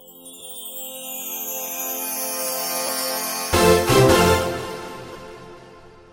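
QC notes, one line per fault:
0.39 s, 2.86–2.89 s and 5.13–5.15 s: lost LE Audio frames. Short gaps of about 15 ms, 22.5 ms and 15 ms, consistent with two, three and two frames of 7.5 ms dropped from the Bluetooth LE Audio stream. In each gap the LC3 decoder refills the missing time by repeating the last good spectrum with randomised phase signs. Any tonal content turns briefly into a noisy smear before normal decoding resumes.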